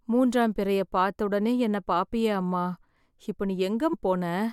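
Compressed frames skipped at 3.92 s: the speech jumps ahead by about 150 ms, which fits roughly seven lost 21.3 ms frames that were missing or rejected by the decoder.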